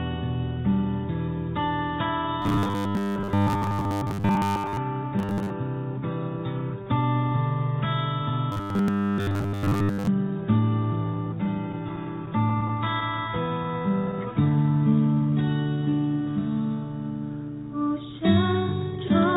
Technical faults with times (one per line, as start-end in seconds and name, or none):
2.42-4.78 robotic sound from repeated short buffers
5.19-5.51 robotic sound from repeated short buffers
8.52-10.08 robotic sound from repeated short buffers
11.44-13.66 repeated stalls (stutter)
13.71-15.91 jitter buffer slow-down